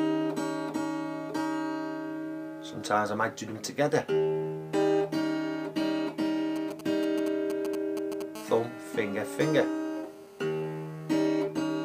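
From 6.56 to 8.22 s, a nearby 2G handset exchanging signalling with its network emits short groups of radio bursts that the audio circuit rectifies. These are GSM signalling bursts: a galloping dit-dit-dit of brief 217 Hz buzzes, fairly loud at roughly 10 dB below the signal.

From 8.35 to 11.28 s, the phone is in a call and transmits continuously at 217 bursts per second, which the circuit again rectifies. The result is GSM phone buzz, a steady, hard, raspy 217 Hz tone rich in harmonics, unrelated to the audio and about 24 dB below it.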